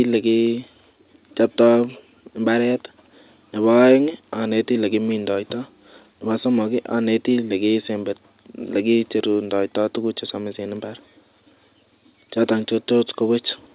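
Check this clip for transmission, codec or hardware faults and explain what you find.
No transmission, codec or hardware faults can be heard in this speech. The band stops at about 4 kHz, as expected from the narrowband telephone codec on the call path, which gives the speech its familiar phone-line quality.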